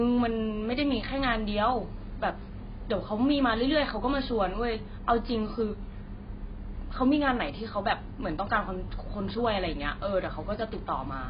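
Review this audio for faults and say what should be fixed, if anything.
AAC compression, throughout the clip: nothing in the speech reaches above 5 kHz, and sibilants sound dull, smeared and warbling. This is likely heavy AAC-LC coding at a very low bitrate, which fits about 16 kbps, where the encoder lowered its cut-off and starved the upper bands. Encode from the original at a higher bitrate, or in a lossless format, to keep the top end intact.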